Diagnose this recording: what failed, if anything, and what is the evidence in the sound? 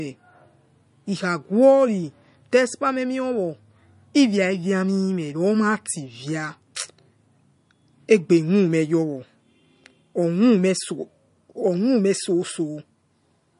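Codec stage: the speech has a hard ceiling at 10.6 kHz all the way through, with plainly audible watery, swirly damage. That's likely MP3 compression at a starved bitrate, something like 40 kbps, cutting the treble and dropping weak frequency lines frame to frame.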